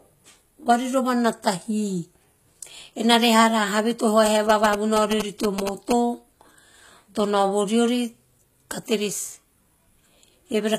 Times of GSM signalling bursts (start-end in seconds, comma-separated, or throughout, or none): 4.26-5.93